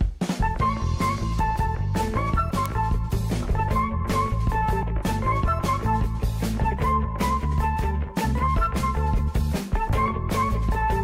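A single sharp tick cuts through the sound at 2.66 s, loud and instantaneous, reaching about -6 dBFS. A much fainter tick follows at 9.89 s, peaking at about -30 dBFS. Both are bit error spikes. Each is one corrupted sample: a flipped bit in memory or on a digital link makes the value jump by a power of two and then snap straight back. That is why each tick is broadband and has no relation to the surrounding audio.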